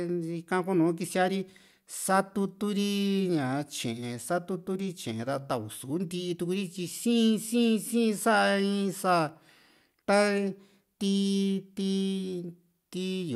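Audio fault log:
No technical faults can be heard anywhere in the speech. There is nothing to log.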